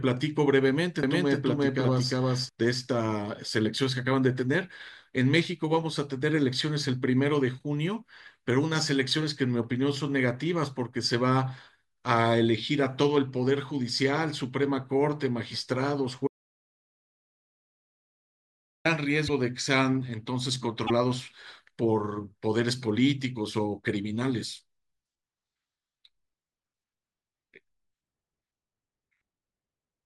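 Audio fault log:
1.03–2.49 s, doubled audio track: the speech is heard twice, with a second full-band copy trailing by roughly 0.4 s at about the same loudness, with no room colour and abrupt edges. This is likely a second, slower capture path mixed in alongside the first.
16.27–18.85 s, audio dropout to silence: the speech cuts out mid-flow for about 2.58 s into silence with no room tone, then resumes abruptly. Anything said in that span is gone, likely because the input was lost while the recorder kept writing silence.
19.27–19.30 s and 20.86–20.90 s, broken MP3 bit reservoir: the speech jumps ahead, and each jump is marked by a brief chirp, burst of noise or short hole lasting about 30 and 44 ms. The timing fits 26.1 ms MP3 frames. The likely cause is dropped frames, which leave the next frame decoding borrowed reservoir bytes from the wrong data.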